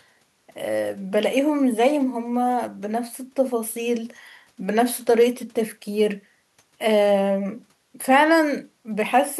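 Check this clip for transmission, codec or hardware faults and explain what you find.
Nothing faulty can be heard in the speech signal, which stays continuous and steady throughout.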